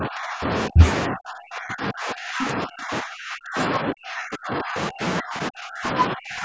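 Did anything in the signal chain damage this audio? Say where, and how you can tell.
Yes, speech suppressed in double talk, at the call-processing stage: the speech is pushed down from 0.0 to 0.5 s, 0.68 to 0.82 s, 1.08 to 5.03 s and 5.2 to 6.44 s, with the deepest dips roughly 25 to 35 dB, and most of the clip is affected. The level collapses in chunks rather than fading naturally, which likely means the echo canceller mistook the near talker for loudspeaker echo while the far side spoke, and attenuated both.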